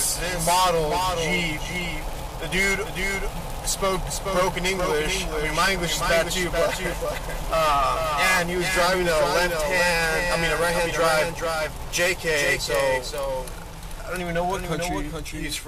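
From start to finish the audio carries a doubled audio track: a second, full-band copy trails the original by roughly 400 ms, sitting only about 5 dB lower. Because the copy has no decay or room colour, it reads as a distinct, flat repeat rather than reverberation. The likely cause is the same signal reaching the mix twice, once through a slower capture path, leaving two copies out of step.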